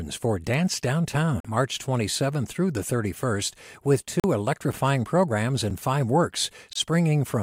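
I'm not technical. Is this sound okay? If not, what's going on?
No. The speech has two kinds of dropout.

At 1.40 to 1.45 s and 4.20 to 4.24 s the sound goes silent for about 40 milliseconds, then resumes where it stopped. This is a Bluetooth stall, likely from radio interference delaying data until the headphones ran out of audio.

Blocks of digital silence occur at 4.72 s, 5.70 s, and 6.73 to 6.76 s. The first two are tiny ticks; the third is a 23 ms hole. Each most likely happens when the audio software misses a deadline and outputs zeros, which cuts abruptly.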